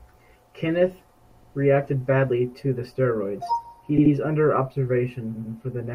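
Speech with repeated frames: a 120 ms block plays three times at 1.31 s, an 80 ms block at 3.97 s, and a 100 ms block at 5.35 s, lengthening the audio. Unlike echo, each identical fragment recurs at full level as a stutter.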